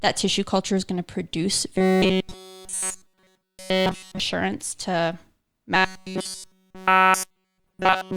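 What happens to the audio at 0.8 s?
Nothing goes wrong at 0.8 s; the speech there plays through intact, with no dropout, click or distortion.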